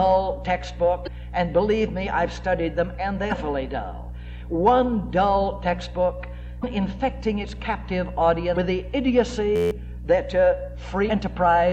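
Short glitches break into the sound at 1.03–1.08 s, 3.28–3.32 s, 6.60–6.64 s and 8.53–8.57 s, each lasting about 40 ms. These are damaged data in a compressed stream: corrupted bytes cause the decoder to misread the frames there, lose sync and hunt for the next valid frame header.

From 9.56 to 9.71 s the sound turns into a steady buzz at about 86 Hz. One 11.6 ms slice repeats exactly 13 times, which fits a 512-sample buffer. This is a system hang loop. The computer or driver froze while the sound hardware kept replaying the same small ring buffer, and roughly 150 ms of audio is lost behind it.

One more glitch of damaged compressed data follows at 11.06–11.11 s.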